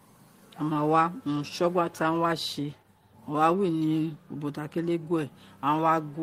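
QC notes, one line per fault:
0.73–0.77 s, short concealed packet loss: a brief smeared wobble just before "wa urun". About 20 ms of the speech arrived too late to decode, so the receiver extended the preceding sound to cover the gap, roughly 13 ms of it, and then crossfaded back into the real signal.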